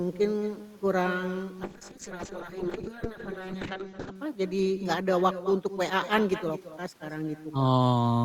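Speech, shadowed throughout by echo with no canceller: a thinner copy trails each phrase by about a fifth of a second, roughly 13 dB down, picked up from the far end's loudspeaker. From 1.68 s to 4.21 s a call bitrate drop makes the voice rough and muffled, with content above 8 kHz gone, consistent with the encoder falling from about 32 kbps to 6 kbps.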